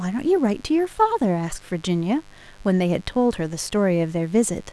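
From start to finish a mains buzz sits about 30 dB under the speech: switching spikes at twice the 50 Hz mains rate leak in, giving a raspy hum. A spectrogram shows even horizontal lines at 50 Hz multiples climbing into the kilohertz range.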